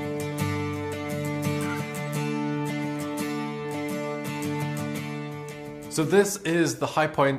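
No technical faults are audible.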